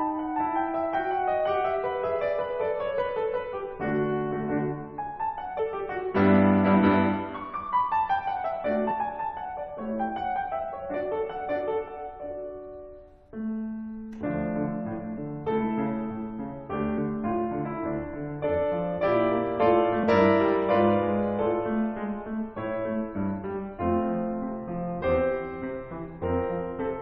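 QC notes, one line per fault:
5.58 s, 8.90 s, 20.03 s: compressed frames skipped. The music jumps ahead by about 200 ms, 50 ms and 150 ms, multiples of a 26.1 ms frame. Overlapping frames smear each join into a brief blip, with no silent gap or sharp click as in a dropout.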